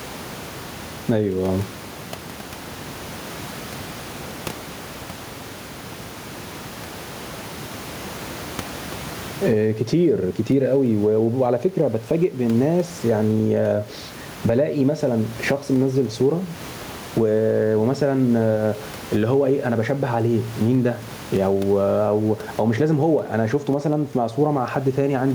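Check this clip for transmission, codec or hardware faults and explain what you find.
One fault runs through the whole clip: gain pumping, likely from input gain set too high with a fast limiter or compressor clamping each loud syllable. The room noise, about 29 dB below the speech, is normal; the gain swings by roughly 15 dB, leaving levels squashed.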